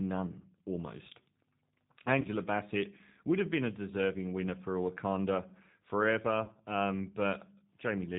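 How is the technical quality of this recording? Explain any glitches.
The recording has clear low-bitrate telephony coding throughout and two brief dropouts where lost audio was filled in by the decoder.

The G.729 codec affects the whole clip. It rebuilds speech from a vocal tract filter, a pitch estimate and a few pulses per short frame, which fits an 8 kbit/s stream. The damage is plainly audible: nothing above 4 kHz survives, so sibilants lose their crispness, and the voice has a rough, slightly synthetic edge.

VoIP packet loss concealed by the speech codec occurs at 2.21–2.27 s and again at 6.45–6.52 s. Each gap is about 30 ms, consistent with three lost 10 ms frames. The decoder bridges each hole by repeating its last pitch and filter settings with decreasing gain. Instead of silence, the speech smears into a buzzy tone or coloured noise that fades. It stays weak or distorted for tens of milliseconds or more after packets resume, because each frame depends on the previous one.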